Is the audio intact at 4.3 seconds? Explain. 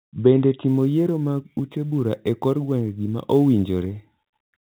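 No. At 4.3 seconds the speech is affected by sample clock jitter, which runs from 0.68 s to the end of the clip. The converter's clock wanders by around 7 microseconds, so samples land slightly early or late, and the resulting error scales with how steeply the waveform is changing. It sounds like a fine hiss or roughness riding on the speech, strongest on loud and bright passages, sitting roughly 35 dB below the signal within the telephone band that stops near 3.8 kHz.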